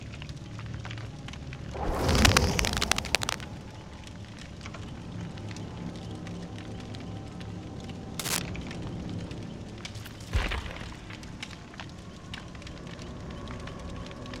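Scratchy, rustling cable scratch noise bursts in from 2.09 to 3.44 s, and briefly at 8.19 to 8.39 s, louder than the sound. Likely a worn connector being moved.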